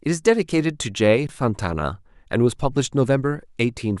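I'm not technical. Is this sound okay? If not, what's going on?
No. An underrun with held sample at 1.27 to 1.29 s: playback briefly ran out of data, the sound froze flat, and resumed after a tiny piece went missing.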